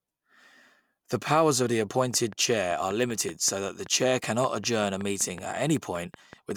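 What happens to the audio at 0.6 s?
Nothing goes wrong at 0.6 s: the speech carries on intact through that moment with no dropout, click or distortion.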